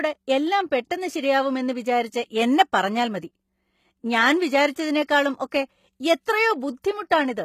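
Throughout the speech the treble sounds synthetic: sibilants come out gritty and metallic, and nothing reaches above about 14.9 kHz. That points to the likely cause, HE-AAC compression at a low bitrate in the region of 20 kbps, where spectral band replication copies the lower spectrum upward instead of coding the real highs. Unlike a plain low-pass filter, which would leave the top dull, this keeps the top bright but wrong, with harmonics that fail to line up across the crossover.

Pre-echo appears at 5.07 s, 6.82 s and 7.10 s as a brief hiss just before a sharp onset, spreading for 15 ms, 18 ms and 11 ms respectively. Each attack falls late in a transform block, so quantisation noise sized for the loud onset also fills the quiet instant ahead of it, and the attack sounds softened. Because it always leads the attack, it is distinct from a click or dropout, which would sit on or after the event.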